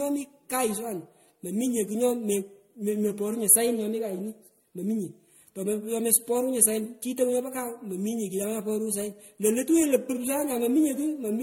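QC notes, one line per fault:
Throughout, generation loss. The speech sounds swirly, smeared and hollow, with blurred attacks and nothing above 16.5 kHz. This likely comes from repeated lossy encoding, about five passes, consistent with MP3 around 64 kbit/s. Each pass requantises on a shifted frame grid, so noise and spectral gaps accumulate.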